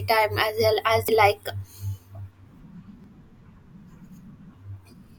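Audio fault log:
1.09 s and 3.04 s, audio missing between chunks: two quick skips in the speech, each dropping roughly 40 ms, with the audio on either side butted straight together and no gap of silence. The skips land about 2 s apart, so the likely cause is a recorder or processor working in 2-second blocks and dropping a bit at each handover.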